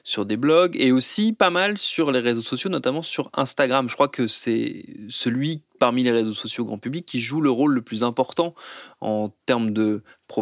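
Nothing in the speech stood out as a technical problem on listening.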